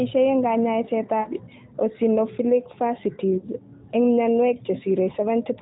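Lost AMR speech frames at 1.20–1.29 s and again at 3.38–3.49 s: frames failed their checksum, so the decoder kept resynthesising from the last good pitch and vocal tract settings while turning the gain down. Each gap, consistent with a run of three 20 ms frames, is heard as a brief smeared, drawn-out tone that sags toward silence before the speech returns weak or rough, over the narrowband AMR-NB sound that cuts off at 4 kHz.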